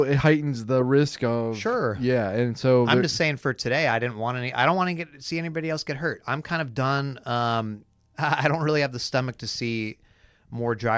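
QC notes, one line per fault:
No faults heard.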